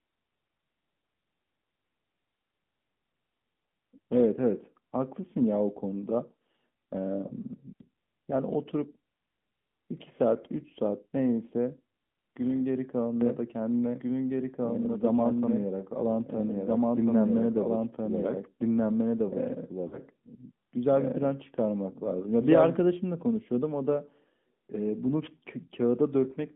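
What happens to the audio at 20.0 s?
Lost AMR speech frames, from 19.88 to 20.01 s: about 40 ms of audio, consistent with two 20 ms frames, failed decoding, so the decoder repeated its last settings with falling gain, giving a brief dip and warble.

A doubled audio track runs over this moment, from 13.21 to 22.81 s. A second, equally loud, full-band copy trails about one and a half seconds behind and starts and stops abruptly. The likely cause is a slower capture path or an edit holding two copies out of step.

Underneath both, the AMR narrowband mobile codec at 10.2 kbps limits the band to 150 Hz–3.5 kHz, with plainly audible buzzy, synthetic coloration.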